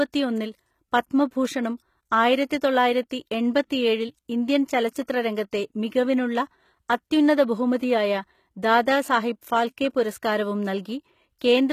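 Speech throughout, with a treble that sounds bright but not quite real: s sounds come out gritty and lispy, with a metallic sheen on the upper frequencies, and nothing at all is present above 14.9 kHz. The likely cause is HE-AAC compression at a low rate, which fits a bitrate of around 20 kbps. The codec keeps only the lower spectrum and rebuilds the treble by copying lower bands upward, so the upper harmonics no longer line up with the real ones.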